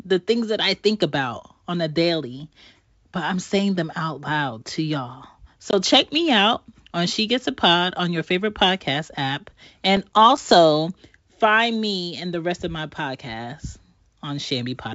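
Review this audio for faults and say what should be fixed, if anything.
Packet loss on an ADPCM call hits at 5.71 to 5.74 s, between "out loud to y'all" and "check me out on". About 20 ms of audio, consistent with two 10 ms packets, drops to hard-edged silence. The decoder's predictor and step size then no longer match the sender's, so the speech resumes with brief distortion. A waveform shows a flat notch with abrupt edges, and a spectrogram shows a thin blank vertical gap. Concealment that interpolates across lost packets and resynchronises the ADPCM state would prevent it.

Processor overload crackle runs from 9.97 to 10.38 s, right after "your favorite podcast app". A handful of audio buffers, each roughly 5 ms long, miss their deadlines and are replaced with silence. The result is a gritty tearing over that stretch. A waveform shows scattered tiny dropouts with hard edges, and a spectrogram shows thin broadband vertical streaks. 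A larger buffer or less competing processor load would prevent it.

The 64 kbit/s G.722 wideband coding carries the speech up to about 7 kHz.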